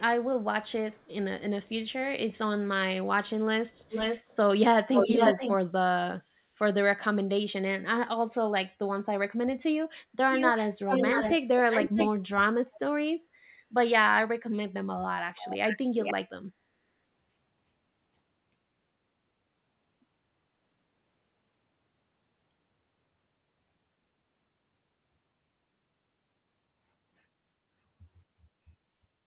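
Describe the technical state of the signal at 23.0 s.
At 23.0 s the signal is intact, with no fault present, only the narrow call-path bandwidth, with nothing above 4 kHz, consistent with a G.711 mu-law codec.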